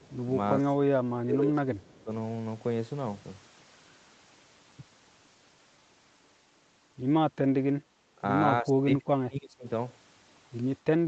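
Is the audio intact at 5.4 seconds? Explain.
Yes, the speech is intact at 5.4 seconds, with no dropout, glitch or distortion at that moment.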